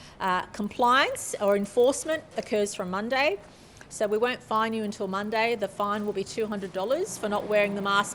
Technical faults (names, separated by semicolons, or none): resampler restarted on every block